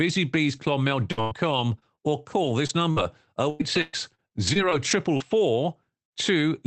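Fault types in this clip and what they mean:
Repeated packet loss (robotic sound): From about 1.11 to 5.22 s, packets kept failing to arrive in time, leaving 13 separate holes. The receiver bridged each one by extending the preceding sound, so roughly 0.6 s of material is stand-in audio, about 15% of that span, with the longest gap lasting 115 ms. Because the gaps recur in quick succession, the stretch sounds choppy, with fragments audibly missing between the patched sections.
Burst of packet loss: At 6.05 to 6.13 s, a single cluster of consecutive packets went missing, taking about 60 ms of audio. The receiver continued the last sound for about 56 ms and faded it as the gap persisted, so the audio holds briefly as a decaying buzz or hiss. It then picks up further along, and the sound that fell in the gap is simply absent. The Opus call path underneath, band-limited to around 8 kHz, is not itself at fault.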